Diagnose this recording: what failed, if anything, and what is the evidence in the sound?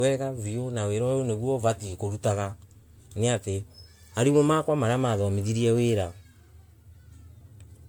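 Codec stage: throughout, the speech sounds swirly, smeared and hollow, worse than one MP3 pass at around 96 kbit/s would give, and consonant attacks blur. This is likely generation loss from about five re-encodes, each requantising on a shifted frame grid. A spectrogram shows flickering holes and accumulated noise below 20 kHz.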